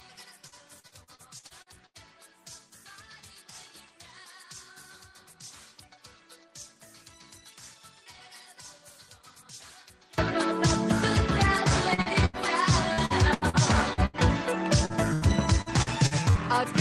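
From 0.00 to 10.18 s the mono sum drops by about 26 dB, leaving a faint residue, likely because one stereo channel is inverted and cancels the shared content. Repeated packet loss makes the audio choppy at 0.47–1.97 s, 11.94–14.16 s and 14.85–16.38 s, with gaps up to about 80 ms patched by extending the previous sound.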